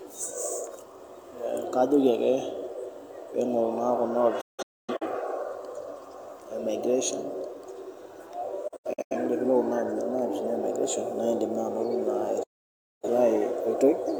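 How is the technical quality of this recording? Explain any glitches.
The speech is interrupted three times by digital broadcast dropouts, where the receiver mutes on corrupted frames. At 4.41 to 5.07 s, about 0.47 s is lost in scattered holes, the longest 256 ms. At 8.68 to 9.16 s, 256 ms is lost in short gaps. At 12.43 to 13.08 s, 597 ms goes silent. Each cut has an 8 ms fade and shows as flat waveform and blank spectrogram columns.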